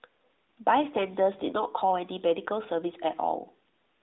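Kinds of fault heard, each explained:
No kinds of fault are heard in this clip.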